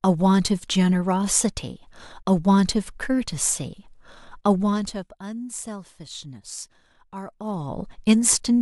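From 4.54 to 5.1 s the level drops by roughly 15 dB, and from 7.24 to 7.82 s it rises by about the same amount. Both moves carry zipper noise: the gain jumps in 1 dB steps, around fifty a second, with no smoothing. Each jump puts a small click in the speech. These ramps carry a rapid ticking that lasts only while the level is moving.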